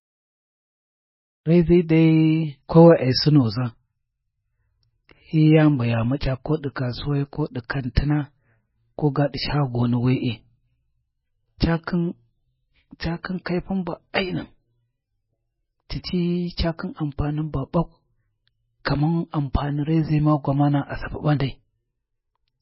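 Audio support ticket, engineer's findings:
Treble missing above 5.6 kHz throughout, watery swirl; spectrogram shows hard ceiling and flickering holes. Likely MP3 compression, heavy damage fitting a very low bitrate.

Pre-echo at 7.95 s: short hiss smeared about 19 ms ahead of attack; waveform shows noise before onset. Codec block noise spreading backwards.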